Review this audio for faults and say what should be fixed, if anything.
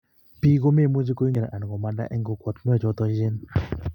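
At 1.32 to 1.36 s the speech breaks into a brief glitch from damaged data in a compressed stream: corrupted bytes made the decoder misread frames and resynchronise. A spectrogram shows a broadband smear; the waveform, a jagged discontinuity. Checksummed transfer and verified file copies would prevent it.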